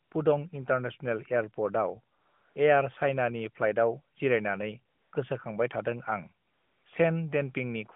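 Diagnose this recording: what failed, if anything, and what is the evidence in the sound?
Codec stage, AMR comfort noise: discontinuous transmission stopped speech frames, so the receiver filled gaps with steady synthetic noise at 0.04–0.12 s (before "पुडं इन्टारनेसनेल"), 2.16–2.56, 4.94–5.12 and 6.46–6.86 s.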